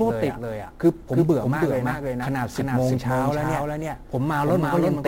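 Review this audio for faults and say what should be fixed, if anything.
There's a doubled audio track running through the whole clip: a second copy of the speech trails by roughly a third of a second, about 5 dB quieter. That's likely a slower capture path or an edit stacking two copies. There's also sample clock jitter throughout: a roughness sitting about 30 dB under the speech that swells on loud, bright syllables and disappears in the pauses, which points to a converter clock wandering by something like 10 microseconds. To prevent both, route the audio through a single capture path and clock the converter from a clean, stable reference.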